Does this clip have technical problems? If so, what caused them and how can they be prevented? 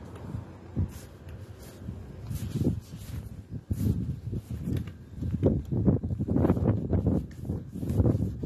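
Yes. The audio was likely squeezed through AAC compression at a low rate, and the damage runs through the whole clip. The encoder kept too few bits per frame, so it discarded the top of the spectrum and coarsely quantised what remained. Nothing is left above 12.6 kHz, which makes the sound dull. Bands starved of bits produce a smeared, warbling, fizzy texture, plainly audible throughout and consistent with a bitrate around 32 kbps. To prevent this, record or deliver at a higher bitrate, or keep a lossless copy.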